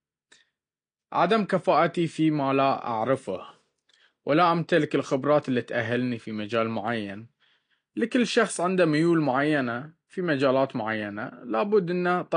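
Throughout, the speech was likely squeezed through low-bitrate AAC compression, fitting roughly 32 kbps: nothing remains above 9.8 kHz, so it sounds dull and smeared.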